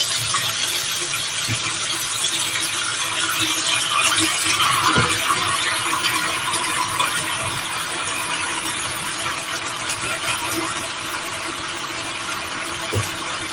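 A noise suppressor built for speech stayed active across these sounds, treating sustained tones and tails as noise and pulling them down by around 5 dB, so held sounds sink throughout while attacks mostly get through.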